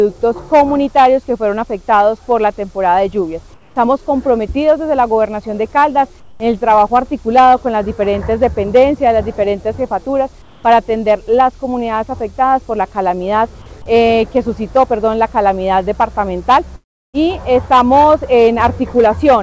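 At 3.54 to 3.76 s, 6.20 to 6.40 s and 10.42 to 10.64 s, comfort noise replaces the background. Steady, featureless hiss stands in, about 2 to 5 dB quieter, likely from discontinuous transmission.

At 16.76 to 17.16 s comes a long network dropout. Roughly 0.38 s is lost, a brief fading fill, then near-silence, with the band capped at 8 kHz.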